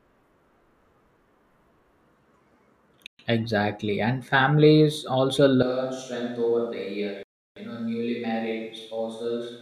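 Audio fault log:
3.07–3.19 s and 7.23–7.56 s, Bluetooth stall: the speech cuts to clean digital silence, about 122 ms the first time and 333 ms the second, then carries on. This is likely a wireless link whose packets were held up by interference, leaving the headphone buffer empty until resent data arrived. Unlike a dropout in the recording itself, there is no click, fade or noise burst, just a dead gap before the sound picks up.
5.63 s to end, switch to a distant microphone: straight after "families also" the speech suddenly turns roomy and hollow, loses low end, drops roughly 5 dB in level and gains a background noise floor about 35 dB below the speech, and it stays that way to the end. The likely cause is the close microphone's signal being lost, with a farther pickup such as a camera mic taking over. A gradual fade or an equaliser change would not bring in the room sound and extra noise at one instant.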